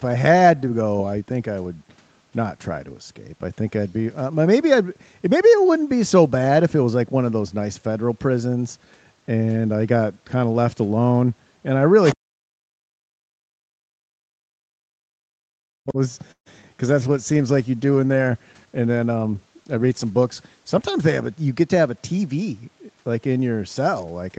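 Other side's voice leaking through, 12.05 to 12.15 s: a brief scrap of a second voice sits about 10 dB below the speech. It is likely loudspeaker echo that the echo canceller failed to remove.

Speech suppressed in double talk, 12.15 to 15.99 s: with both sides talking, the canceller likely turns the talker down too, by as much as about 40 dB, so the speech dips.

Call audio freeze, 16.31 to 16.48 s: delayed packets likely drain the jitter buffer. The last sound is stretched, then 100 ms of silence follows, adding a 144 ms gap with nothing lost.

Short concealed packet loss, 16.62 to 16.65 s: 20 ms of audio never arrives. The receiver patches it with a brief continuation of the preceding sound, heard as a quick smear.

Call bitrate drop, 16.81 to 23.06 s: the encoder falls from 32 to 14 kbps and stays at the lowest rate for about 4.6 s, so the speech turns rough and watery.

Jitter buffer speed-up, 18.77 to 20.25 s: to shed excess delay, the receiver cuts out about 150 ms of pitch periods. 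Speech runs at 109% speed at unchanged pitch and sounds hurried.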